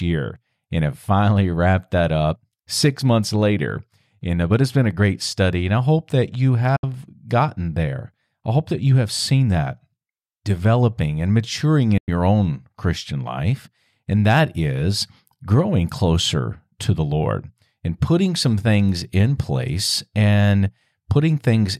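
At 6.76 s, after "I hope that you", the speech cuts out for 80 ms and returns on "gotten there I hope". At 11.98 s, after "developing and maturing", a 110 ms hole follows. Both are digital broadcast dropouts. Bad frames made the receiver mute with a quick 8 ms fade. The gaps fit two and three lost frames. That audio is gone.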